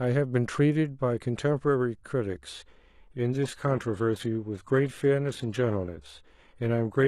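Adaptive stream at a lower bitrate, from 2.54 s to the end of this speech clip: the quality drops suddenly with no gap, as the player switches to a lower-bitrate rendition after the connection slowed. The treble loses its natural detail and takes on a synthetic, swishy sheen, with more smearing artefacts. This fits a move from roughly 96 kbit/s AAC to a 16 kbit/s HE-AAC stream that rebuilds the upper band instead of coding it.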